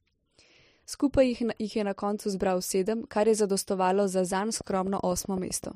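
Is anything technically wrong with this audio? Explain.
Yes, there's a train of clicks from 4.61 to 5.65 s near the end of the speech. You get around ten sharp, near-identical ticks at an even 7.8 per second, peaking about 5 dB above the speech itself, so they cut right through and sit in the gaps too. Something is likely injecting a repeating pulse into the signal chain, such as interference from nearby gear or a faulty connection or power supply.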